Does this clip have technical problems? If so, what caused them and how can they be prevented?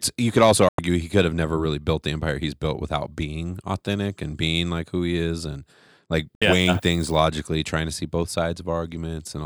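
Yes. The speech cuts abruptly to silence at 0.69 to 0.79 s (about 96 ms) and at 6.36 to 6.42 s (about 64 ms). These are digital broadcast dropouts: the receiver lost or rejected corrupted frames, which fits two or three frames each time, and muted until clean data returned. A stronger, steadier received signal and a better-placed antenna would prevent them.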